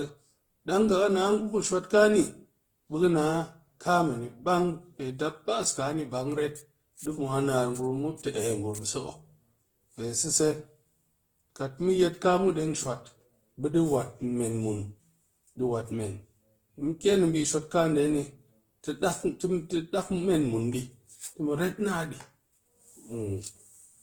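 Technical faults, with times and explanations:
Throughout, Opus compression: the encoder was most likely running Opus in its CELT music mode at a very low rate, roughly what 16 kbps would give, and couldn't afford to code each band's fine detail. It kept band energies and filled the gaps with folded or noise-like content, so the speech sounds plainly rough, grainy and hissy rather than hollow or swirly, even though the bandwidth stays full, reaching about 20.1 kHz.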